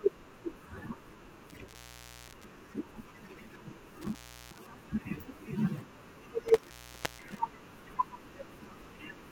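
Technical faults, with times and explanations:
1.50–2.45 s, 4.02–4.62 s and 6.48–7.39 s, intermittent contact: a loose cable or plug connection breaks for about 0.53 s, 0.36 s and 0.49 s, so the speech drops out abruptly, with crackle at each edge as the contact scrapes and faint hiss while the line is open.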